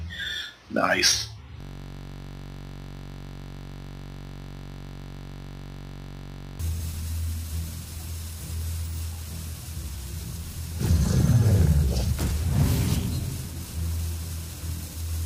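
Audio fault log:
1.61–6.59 s, system hang loop: a steady, rough buzz at about 47 Hz replaces the sound for five seconds. The system froze while the audio hardware kept replaying one 21.33 ms piece of its ring buffer, which fits a 1024-sample buffer.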